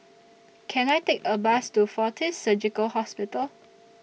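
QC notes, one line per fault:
0.89 s, electrical switching spike: a sharp snap lasting only a few milliseconds and peaking at around -20 dBFS sits on top of the speech. The speech carries on underneath it with no gap, which separates it from a dropout or buffer glitch that would cut the sound itself. The hard, dry edge with no acoustic decay is likely an arc from a nearby switch or motor picked up on the audio line.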